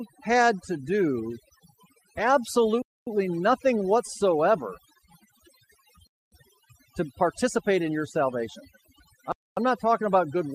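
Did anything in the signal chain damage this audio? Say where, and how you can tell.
Yes, two stages did damage here. First, call processing: overdone noise removal runs through the whole speech clip. The background sits at near silence with little twinkling specks. That's a suppressor set too hard, knocking individual frequency bands down or out whenever they drift close to its noise estimate, so the quieter parts of the voice get dragged down along with the noise.

Second, a transport or playback problem: gaps between chunks. There are three hard-edged holes of 250 ms each, at 2.82–3.07 s (just before "nothing whatsoever"), 6.07–6.32 s, and 9.32–9.57 s (right before "not talking about"). They land every 3.25 s, which is a 3 s chunk plus the gap, so the audio is stored or sent in 3-second pieces and silence gets inserted at each join, maybe from padding or a player starting each chunk late.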